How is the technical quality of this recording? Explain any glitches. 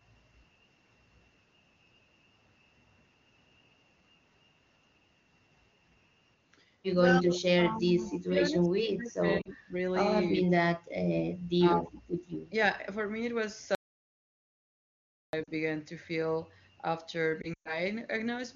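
The recording has several clear faults: repeated gain ducking, a faint echo, short codec gaps and one full dropout. The AMR wideband (HD Voice) coding underneath sounds clean, with no audible roughness, which points to one of its higher rates, such as 23.85 kbit/s.

Speech suppressed in double talk occurs from 7.08 to 9.76 s, again from 10.30 to 10.62 s, and from 11.59 to 12.03 s. The likely cause is an echo canceller that, with both parties talking at once, couldn't separate the near voice from loudspeaker echo and turned everything down. The speech sinks by about 20 dB in the first and third stretches and about 30 dB in the second. Across the first stretch it is pulled down in pieces for roughly two seconds in total.

Echo leak is heard from 8.05 to 8.13 s, inside the first suppression stretch. A faint delayed copy of the speech, arriving about 202 ms late and sitting about 25 dB below the direct voice, slips through for a brief scrap. 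This is likely because the far end's echo canceller, with its loudspeaker playing the call, didn't fully remove what its microphone picked up and sent the residue back.

Lost AMR speech frames occur at 9.41 to 9.49 s, 15.43 to 15.49 s, and 17.42 to 17.80 s. Radio errors corrupted frames, so the decoder repeated its last good pitch and vocal tract settings at falling gain. The first two are 40 ms gaps, consistent with two frames each, where the sound drops toward near silence. The last scatters losses over 240 ms, with a 120 ms run where the sound drops to near silence before returning rough.

Audio dropout to silence runs from 13.75 to 15.33 s, about 1.6 s. The speech cuts off mid-flow into silence, with no room tone, and resumes abruptly. Whatever was said in that span is gone. The likely cause is a momentary loss of the input, such as a failed link or device, while silence kept being written. 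Lost frames follow almost immediately afterwards at 15.43 s.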